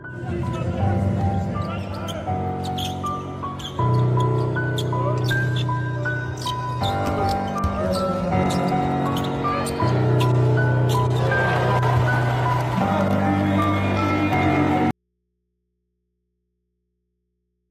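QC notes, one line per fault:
14.91 s to end: audio dropout to a faint residue, likely a lost feed into a still-open input; sound cuts abruptly to mains hum about 55 dB down.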